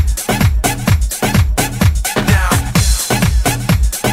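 From start to finish there's sample clock jitter running under everything. The converter's timing wobbles by something like a few microseconds, so each sample lands a touch early or late, and that error scales with how fast the waveform is moving. You hear it as a grainy hiss sitting roughly 30 dB below the signal, thickening on loud, bright passages and dropping away whenever the audio goes quiet.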